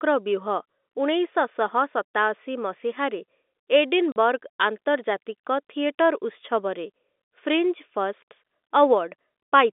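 At 4.12 to 4.16 s the speech drops out for 40 ms, packet loss filled with silence: the receiver played a flat gap where audio went missing, a length that fits two 20 ms packets. The hole has hard edges against the band-limited telephone sound.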